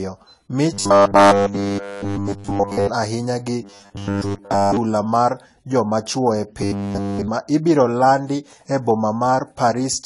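From start to finish the speech is dull and smeared, with a fizzy, warbling edge on sibilants. Nothing is heard above 11.4 kHz. This is likely AAC compression, its damage plainly audible, which fits AAC-LC at a low bitrate near 32 kbps.

From 0.74 to 2.87 s the speech turns into robotic sound from repeated short buffers. A rigid metallic buzz sits at 100 Hz, which fits a 10 ms chunk being replayed. The whole stretch is repeated buffers. It recurs from 3.63 to 4.77 s, with most of it repeated. Right after "chuo e" it returns from 6.62 to 7.28 s, fully repeated. The likely cause is audio arriving too seldom.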